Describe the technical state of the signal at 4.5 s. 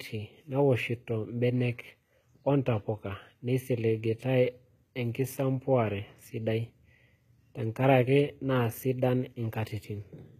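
At 4.5 s, as across the whole clip, there is plainly audible codec damage, likely HE-AAC compression at a low bitrate near 20 kbps: the treble is rebuilt from copied lower bands rather than coded, so it sounds metallic and unnatural, with nothing above 14.9 kHz.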